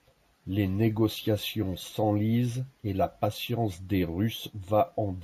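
Throughout the speech, each sample has been held and repeated with no smoothing filter, which fits a 16 kHz to 48 kHz rate rise. This imaging from sample-and-hold upsampling puts mirrored copies across 8 to 16 kHz, about 23 dB down: a bright metallic fizz riding the speech.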